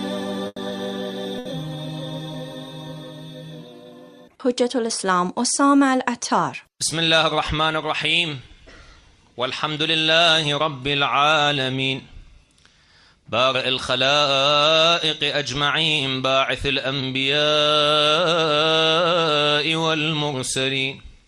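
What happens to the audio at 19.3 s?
Nothing goes wrong at 19.3 s; the audio plays through that moment intact, with no dropout, click or other fault.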